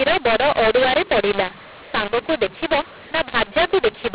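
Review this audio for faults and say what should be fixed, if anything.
A mu-law and A-law mix-up runs through the whole clip. The telephone speech was coded with mu-law but decoded as A-law. Levels come out scrambled, and the quietest samples jump well above silence. So speech sounds harsh and distorted, and pauses fill with noise. To prevent it, state the G.711 law explicitly and decode with the matching one.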